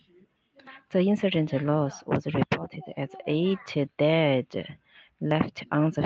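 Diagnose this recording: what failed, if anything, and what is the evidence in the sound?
Automatic gain rising in the call processing: from 0.06 to 2.06 s the speech and background swell together by about 4 dB, settling before "was reported as eight".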